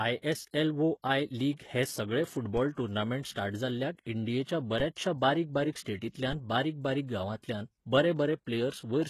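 HE-AAC compression, throughout: heavy codec damage, likely from HE-AAC v2 at about 16 kbps, rebuilds the treble by copying lower bands upward. Nothing remains above 12.3 kHz, and s sounds turn gritty.

DC step at 2.57 s (after "आय लीग हे सगळे"), 4.80 s (after "टुर्नामेंट स्टार्ट जाल्ल्याक इंडियेच्या") and 6.33 s: the zero line jumps, giving a low thump or click, then the offset decays away.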